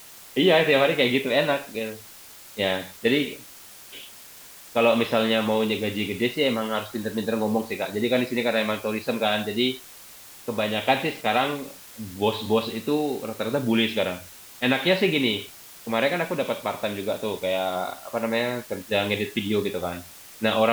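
From start to finish the speech carries low bit depth with dither: only 7 bits are used, and the rounding error is spread into steady white hiss roughly 20 dB under the speech. Unlike undithered truncation, it stays constant through pauses and never turns grainy or distorted.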